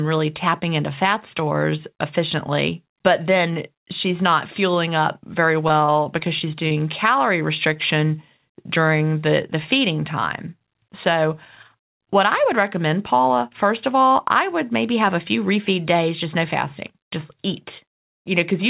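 From 5.68 to 6.82 s, just after "not fueling up very", repeated packet loss left a string of short holes, none longer than 27 ms, that the receiver patched by extending the preceding sound. About 13% of that stretch is concealed, so the speech turns choppy.

At 7.74 to 7.78 s, a short concealed packet loss lost 20 ms of audio, which the decoder covered by continuing the last sound before blending back in. Within this narrowband G.711 path, which carries nothing above 4 kHz, it shows up as a brief smear or wobble.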